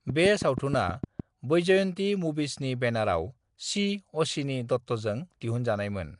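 Right from the start, between 0.1 and 1.21 s, there's a train of clicks: about seven sharp ticks at a steady 6.4 per second, each popping up roughly 10 dB above the speech and sharing much the same shape. They stop just before "वैजयंती मूवीजनि". A regular pulse like that is likely interference leaking in from nearby gear or a faulty connection, and it reads as a mechanical ticking laid over the talker.

Running under the whole clip is what sounds like Nellymoser compression, the old Flash microphone codec, and the damage is plainly audible. Nothing survives above 10.6 kHz, and the speech carries that rough, hissy halo and smeared, underwater blur you get when quiet bands are starved of bits and backfilled with noise. The rate of the artefacts points to something around a 44 kbps stream.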